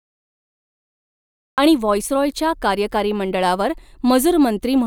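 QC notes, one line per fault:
0.00–1.58 s, cut-off start: the clip holds digital silence until 1.58 s, then the speech enters abruptly mid-sound with no natural onset and a sharp edge, because capture began after the talker had already started. Unlike a slow fade-in, there is no gradual level rise. Unlike a mid-clip dropout, nothing audible precedes the gap, and the silence is digital silence rather than room tone.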